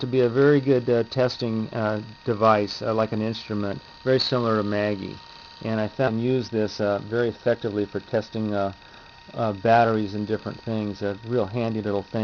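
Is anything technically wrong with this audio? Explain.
Yes, there are two faults.

At 6.07 s there is a skip ahead: roughly half a second of sound is missing, and playback jumps straight to later audio with no filler. That stretch was dropped, either in transit or by the jitter buffer when it overflowed while newer audio was already queued. It sounds like an abrupt cut. On a waveform or spectrogram, the two sides butt together at a hard seam, with harmonic traces or the envelope changing discontinuously instead of evolving smoothly.

From 6.16 to 8.26 s comes a jitter buffer speed-up, running at about 111% speed. The buffer was still holding more audio than its target, so the receiver trimmed short slices one or a few pitch periods long, over and over, removing roughly 200 ms in total. The pitch stays the same but the sound feels hurried. A spectrogram shows compressed timing with unchanged harmonic spacing, and the waveform may reveal small splice points at regular intervals.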